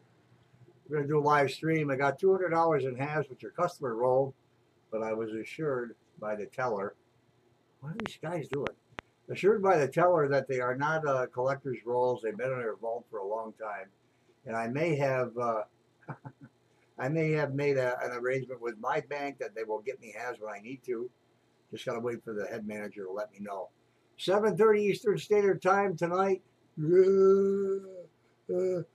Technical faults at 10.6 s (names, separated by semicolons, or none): none